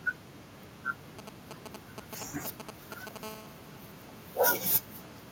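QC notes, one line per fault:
1.19 to 3.18 s, GSM signalling bursts: a galloping dit-dit-dit of short raspy buzzes, nearly as loud as the speech. A 2G handset close to the recording chain is exchanging brief control traffic with the network. The audio circuitry rectifies each radio burst, and its 217 Hz framing comes through as clipped fragments of buzz. The buzz arrives in separated clusters with gaps between them, which distinguishes it from continuous phone buzz.
3.23 to 5.18 s, GSM phone buzz: a hard, harmonic-rich rasp at 217 Hz that runs unbroken under the speech, about 16 dB below it. The same kind of nearby handset has moved into an active call and now transmits a pulse in every 217 Hz frame without pause. Rectification turns that pulse train into a steady buzz. The buzz holds nearly steady and stays unrelated to the speech, which separates it from the stuttering signalling bursts just before it, and its sharp edges distinguish it from a smooth mains hum.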